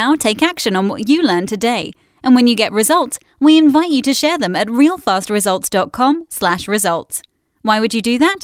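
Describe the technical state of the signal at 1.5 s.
At 1.5 s the speech signal is intact, with no dropout, distortion or other technical fault audible at that moment.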